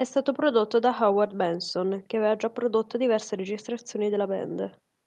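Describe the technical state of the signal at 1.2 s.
At 1.2 s the speech signal is intact, with no audible dropout, distortion, glitch or other fault at that point.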